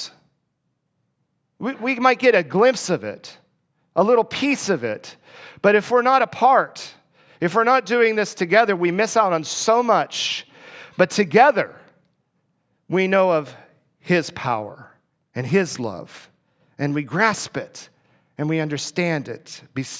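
Speech recording with no technical faults heard anywhere in it.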